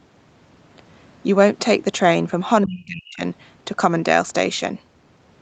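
From 2.66 to 3.22 s the speech sinks by roughly 35 dB for about half a second, likely speech suppressed in double talk: the echo canceller mistook the talker for loudspeaker echo and turned both down.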